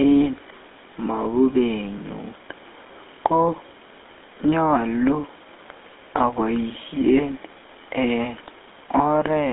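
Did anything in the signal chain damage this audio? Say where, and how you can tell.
Yes. The codec stage: GSM full-rate coding runs the whole clip, giving the speech a buzzy, gravelly roughness consistent with a 13 kbps stream. Sparse pulse excitation drives a vocal-tract model, so a spectrogram shows smeared harmonics and a hard band from 200 Hz to 3.6 kHz.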